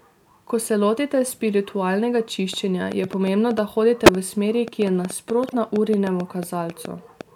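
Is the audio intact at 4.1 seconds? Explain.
No. Interference, likely from nearby equipment or a faulty connection, injects a train of clicks from 2.54 s, just after "se lotite spiritualnega", to 7.22 s: around thirty similar pulses at an irregular pace of about 5.1 per second, peaking about 10 dB above the speech and heard as uneven ticking.

A corrupt frame was decoded just before that moment, from 4.06 to 4.09 s. One compressed frame with flipped bits was played anyway, spreading energy to the wrong frequencies and producing a brief error peaking around -5 dBFS.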